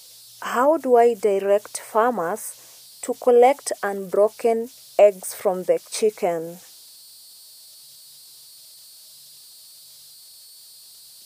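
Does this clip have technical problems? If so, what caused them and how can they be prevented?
Yes, there are converter idle tones running through the whole clip: a whistle somewhere around 4 kHz that stands out in the pauses and turns into a grainy fizz under the speech, sitting about 28 dB below the signal. It's a delta-sigma converter running without dither, so on low-level input it locks into repeating bit patterns that ring as tones. To prevent it, make sure the converter's dither is enabled, or add a little noise ahead of it.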